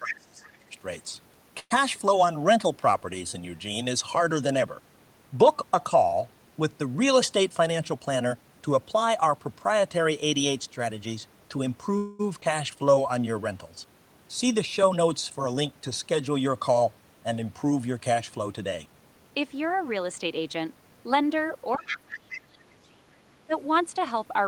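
The clip is speech with several call-path faults. From 0.0 to 0.74 s, speech suppressed in double talk pulls the level down by roughly 20 dB, likely because the echo canceller mistook the talker for loudspeaker echo while both sides spoke. The same suppression returns at 21.76 to 23.15 s, dropping by about 25 dB, and briefly at 23.46 to 23.53 s. On a waveform these show as sudden pinched envelopes, and on a spectrogram the upper harmonics thin out or vanish. A call audio freeze at 1.59 to 1.72 s stretches the last sound into a fading buzz or hiss for 110 ms, including about 40 ms of silence. A second freeze at 11.98 to 12.21 s fills 216 ms. The likely cause is delayed packets draining the jitter buffer, and a spectrogram shows smeared, static bands where the speech pattern stalls. Jitter buffer speed-up hurries the delivery without changing pitch at 7.50 to 8.49 s (110%), 14.83 to 15.73 s (109%) and 17.93 to 19.40 s (109%). 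Short pitch-period chunks are being cut out to shed excess delay, leaving compressed syllable spacing with unchanged harmonic spacing. A skip ahead at 12.41 to 12.44 s drops around 70 ms of audio. The waveform joins two mismatched segments almost directly, and the spectrogram shows an abrupt vertical discontinuity. Jitter buffer slow-down at 12.76 to 13.25 s plays at 88% speed, adding 66 ms by repeating pitch periods to rebuild the buffer reserve. Sounds become drawn out, and the spectrogram shows elongated, repetitive harmonic stretches. The other side's voice leaking through appears at 21.77 to 21.97 s, about 5 dB below the talker, and at 22.33 to 22.38 s, about 15 dB below. This is likely residual loudspeaker echo that the canceller left in the microphone signal, showing as a second harmonic pattern overlapping the main one.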